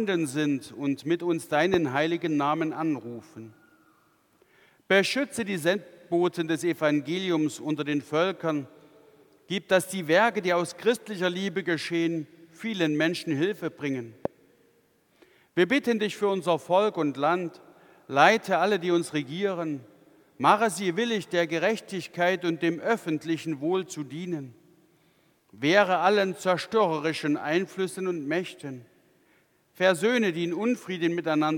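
A loud pop occurs at 1.74–1.76 s and again at 14.25–14.28 s, each a single sharp transient lasting about 20 ms and peaking roughly 15 dB above the surrounding audio. The cause is likely a brief voltage step or pulse, from a switch, plug contact, static discharge or driver glitch, entering the chain and being shaped by the downstream circuitry. Each is heard as an abrupt click-thump riding on top of the sound, which continues beneath it.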